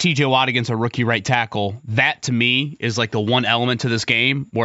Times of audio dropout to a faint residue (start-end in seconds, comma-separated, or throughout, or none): none